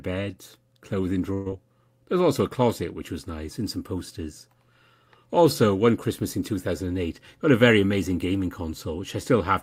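From 1.33 to 1.50 s the sound smears into a held, fading tone, then jumps ahead: a burst of packet loss, about 120 ms concealed by stretching earlier audio.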